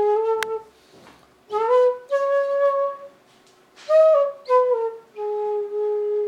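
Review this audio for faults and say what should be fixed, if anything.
At 0.43 s there is a single sharp snap laid on top of the sound, an electrical switching spike. It is consistent with a nearby switch, relay or motor arcing and the audio line picking up that brief burst of interference. On a waveform it is a near-vertical spike only a few milliseconds wide. On a spectrogram it is a thin vertical line running across the whole frequency range. Fixing it means removing or interpolating that short spike. To prevent it, keep cables away from switching equipment and use balanced, well-shielded, properly grounded lines.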